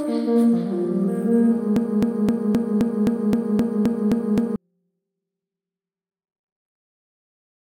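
From 1.76 s to 4.56 s a broken-record loop replays one 0.26 s fragment eleven times back to back, and the audio due there is lost. Unlike echo, every repeat is identical and undecayed. A stalled player or stream likely kept resending its last fragment.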